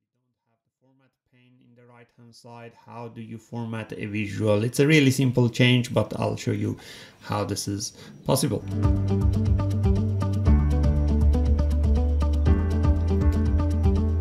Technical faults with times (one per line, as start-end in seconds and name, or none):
none